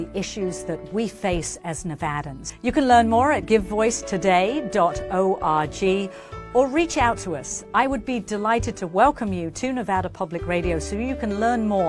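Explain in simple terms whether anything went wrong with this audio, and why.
Nothing stood out as wrong when listening to this audio.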